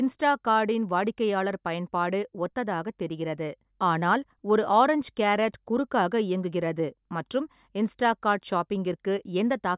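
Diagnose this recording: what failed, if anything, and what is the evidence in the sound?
Nothing failed: no audible fault at any stage of the chain, from capture to playback.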